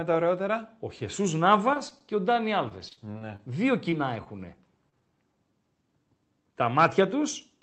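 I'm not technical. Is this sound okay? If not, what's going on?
No. From 1.71 to 3.40 s there is repeated packet loss, which gives a robotic sound. Pieces of the call kept going missing, thirteen times in this stretch. Each time, the receiver covered the gap by stretching the last bit of sound. The result is choppy.

Three quicker hiccups follow, each a short concealed packet loss: at 3.90 to 3.94 s, 4.24 to 4.27 s and 4.89 to 4.94 s. Each time, a few hundredths of a second never arrived. The gap was filled in and blended back, so you hear a tiny smear or wobble.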